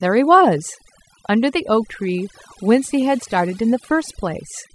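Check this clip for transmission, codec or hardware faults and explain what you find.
The one fault here is processing, not transmission or hardware. Throughout the speech there's overdone noise removal: a heavy-handed denoiser clamps bands near its noise estimate, leaving twinkly near-silence between phrases.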